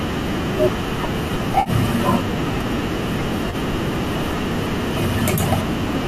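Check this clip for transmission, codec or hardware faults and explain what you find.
The audio has three short AAC frame loss with concealment events, at 1.60 to 1.70 s, 3.50 to 3.55 s and 5.35 to 5.40 s. The first gap lasts about 60 ms, which fits roughly six lost 10 ms frames of the low-delay stream. Each later gap lasts about 30 ms. The decoder bridges each hole by re-using the last good spectrum, so the speech turns briefly smeared and phasey instead of cutting to silence or clicking, as a plain dropout would. The likely low-delay AAC coding at 64 kbps does only light damage.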